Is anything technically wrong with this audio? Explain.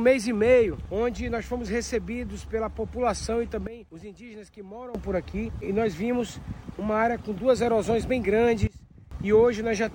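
Yes. At 3.67 s the level abruptly falls by about 15 dB and stays down until 4.95 s, and at 8.67 s it drops again, by about 20 dB, until 9.11 s, with the background sinking together with the sound each time. This is a sudden gain jump, likely a digital gain setting applied from one sample to the next without any ramp, so the level steps down and back rather than fading.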